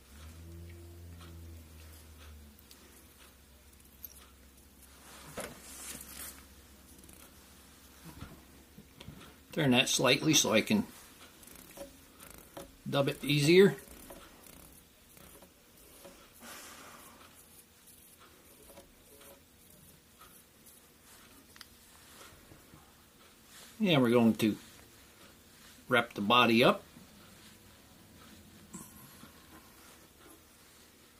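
Nothing stood out as a technical problem anywhere in this recording on listening.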